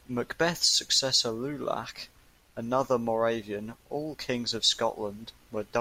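No technical faults can be heard anywhere in this recording; the signal stays steady and intact throughout.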